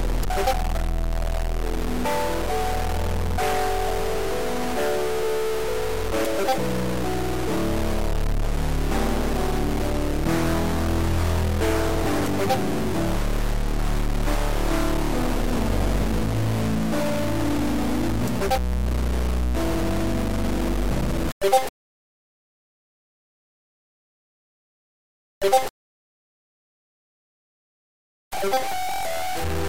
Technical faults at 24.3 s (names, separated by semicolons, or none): stuck bit